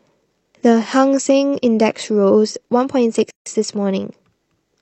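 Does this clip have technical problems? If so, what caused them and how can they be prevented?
Yes, there's one. At 3.31 s the speech drops into silence for about 156 ms, then picks up at 3.46 s right where it left off. That's a gap at a join of encoded pieces. The audio was encoded in separate chunks, and each run's start-up delay and padded last frame stayed in, leaving dead air with smeared edges at the seam. To prevent it, trim the encoder delay and padding before joining, or encode everything in one pass.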